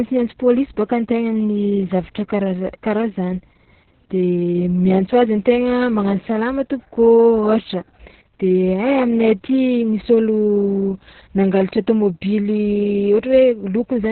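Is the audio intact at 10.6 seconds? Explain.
No, not at 10.6 seconds, and not anywhere else in the clip either. The whole recording carries Opus voice compression running hard. There's nothing above about 4.3 kHz, so the speech sounds boxed-in and muffled, like an old phone line. On top of that it's hoarse and a bit robotic, because the linear-prediction coder is only giving the excitation a rough sketch. All of that fits narrowband SILK squeezed to roughly 6 kbps.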